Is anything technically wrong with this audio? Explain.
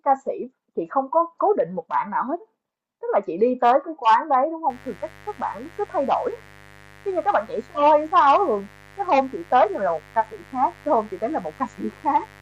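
Yes. From 4.7 s to the end of the clip, the speech carries a mains buzz. Interference from the 50 Hz supply leaks into the signal path as sharp switching spikes, two per cycle, so 100 per second. Those spikes produce a dense stack of 50 Hz harmonics reaching well into the kilohertz range. The result is a steady, raspy buzz under the speech, roughly 25 dB below it.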